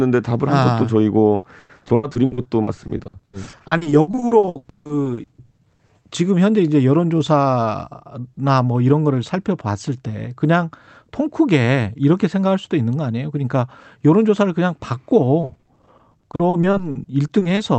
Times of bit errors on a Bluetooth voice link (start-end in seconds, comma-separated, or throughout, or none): none